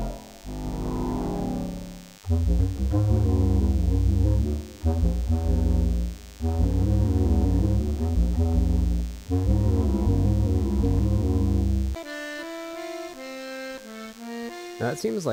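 Running under the whole clip is DECT cordless phone buzz: a nearby handset or base fires a radio burst every 10 ms, and the audio circuitry rectifies it into a thin, steady 100 Hz buzz full of harmonics, sitting somewhere around 25 dB below the sound.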